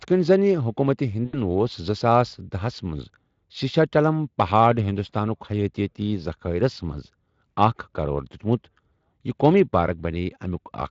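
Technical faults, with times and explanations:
1.25–1.40 s: VoIP packet loss concealed by the speech codec. About 80 ms of data went missing, which fits four 20 ms frames. The Speex decoder bridged the gap by repeating its last pitch and spectral envelope at falling gain, producing a short stretched, fading smear.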